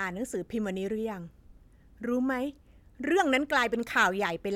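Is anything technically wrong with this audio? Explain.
No, no technical faults.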